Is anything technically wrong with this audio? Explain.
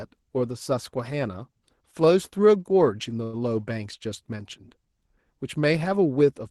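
Yes, the speech has one short stall from a late packet, from 3.23 to 3.36 s. A packet arrived late, the jitter buffer ran dry, and the receiver stretched the last sound for about 97 ms, then resumed exactly where it left off, now slightly behind. Unlike a lost packet, nothing is skipped. A sound is simply held too long, with a faint buzz or dip.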